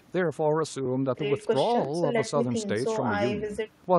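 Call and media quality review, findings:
Periodic USB or driver dropouts, 0.86–3.84 s: short regular ticks in the speech, evenly spaced about 1.00 s apart, roughly four in all. Each skips a couple of milliseconds of audio outright. Probable cause: a recurring task stalling the USB bus or audio driver.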